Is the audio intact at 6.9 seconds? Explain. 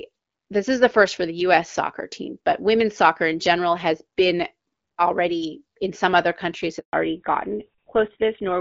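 No. A handover gap silences the sound from 6.79 to 6.93 s: frames stop arriving while the call switches networks, so audio fades within milliseconds to 140 ms of dead air rather than crackling or glitching. From 6.93 s a fallback to narrowband follows. Everything above 4 kHz disappears, which fits a drop to GSM full rate. The sound returns duller but continuous, unlike the gap's complete silence.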